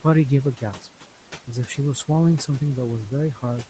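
Throughout, noise suppressor artifacts: the room noise drops about 12 dB between phrases and returns under speech, gated frame by frame. A spectrogram shows a patchy noise floor.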